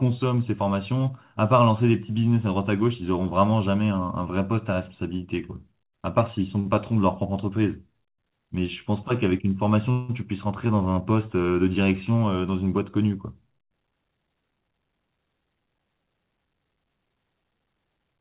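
At 6.6 s the speech hangs for a moment: a short stall from a late packet, running to about 6.67 s. The next packet had not arrived in time, so the jitter buffer ran dry and the receiver stretched the last sound by about 50 ms, giving a brief held sound with a slight buzz or dip. Once the packet turned up, playback resumed exactly where it had stopped. Nothing is lost, and everything after it is 50 ms late.

From 9.91 s to about 10.11 s there is a longer call audio freeze. The last sound is carried on for about 176 ms as a fading buzz or hiss. It never drops to silence. The likely cause is packets held up in transit until the buffer emptied. Playback then continues from the same point, so a gap of roughly 0.18 s has been inserted while no speech is skipped. The telephone-band codec path cuts everything above 4 kHz, which makes the fill sound dull.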